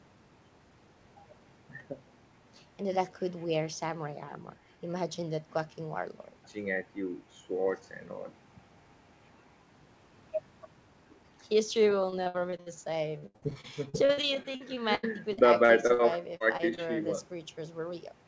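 Speech that turns choppy and robotic from 12.10 to 12.68 s and again from 13.18 to 16.01 s shows repeated packet loss, with gaps up to about 81 ms patched by stretching the preceding sound. Brief smears or wobbles at 16.37 to 16.45 s, 16.57 to 16.61 s and 16.75 to 16.79 s are short concealed packet loss, where a few hundredths of a second went missing and were filled in before blending back. Throughout, the audio carries nothing above 8 kHz, which fits a G.722 call path.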